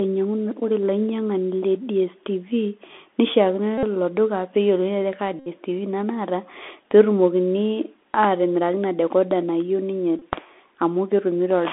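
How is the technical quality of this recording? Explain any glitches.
The technical quality is poor: the whole recording has passed through a narrowband Bluetooth headset link, and the link drops out three times.

Bluetooth CVSD headset codec, throughout: the speech sits in a telephone band of roughly 250 Hz to 3.5 kHz, with nothing above that. CVSD codes each sample as a single up-or-down bit at a 64 kbps rate and adapts its step size. Here that damage is plainly audible. Fast, loud high-frequency content outruns the step and distorts, s sounds come out scratchy, and a granular hiss runs under the speech.

Bluetooth headset packet repeated, at 3.78–3.84 s, 5.39–5.48 s (just after "ajo kaa") and 10.19–10.22 s: when voice packets are lost, the decoder replays the previous packet's bits. Because the same data repeats every 3.75 ms, each dropout becomes a steady buzz near 267 Hz in place of the speech. 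The gaps cover about 52.5 ms, 67.5 ms and 22.5 ms, which fits runs of roughly fourteen, eighteen and six lost packets. The buzz stops once good packets return.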